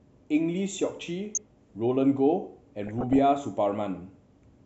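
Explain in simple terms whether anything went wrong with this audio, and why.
DAB burbling at 1.35 s and again from 2.85 to 3.19 s: weak digital radio reception corrupted the data, making short blips of noise over the speech.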